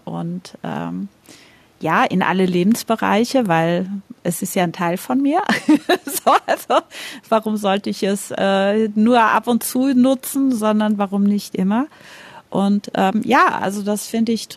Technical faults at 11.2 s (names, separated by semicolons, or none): none